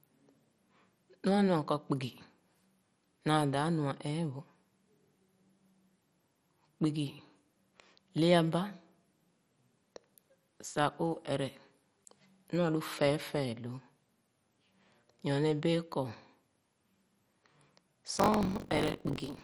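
MP2 compression runs through the whole of this speech clip. Upper bands are switched off or flicker in and out while the rest are coarsely quantised, giving a dull, gurgling, granular texture. That heavy damage is likely from MPEG Layer II encoding at a low rate, consistent with something near 56 kbps, where too few bits are spread across the 32 sub-bands. Buffer tearing then joins in from 18.13 s to the end at 19.44 s. It is a robotic buzz at 46.9 Hz, which fits a 1024-sample buffer, because writer and reader have drifted so that they cross inside every period. About a fifth of each buffer replays audio from roughly 40 ms earlier, and the hard joins on either side of that stale stretch repeat at the buffer rate.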